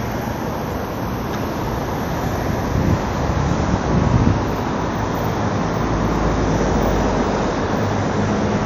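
From start to finish, the audio carries plainly audible codec damage, likely from WMA compression. Nothing is heard above 15.7 kHz, so the top end sounds dull and closed. The transform coder spreads its quantisation noise over long blocks. Each sharp event gains a ringing smear around it. Quiet detail is thrown away and the texture turns washy. A hiss swells and fades with the sound. This points to a low bitrate, near 48 kbps.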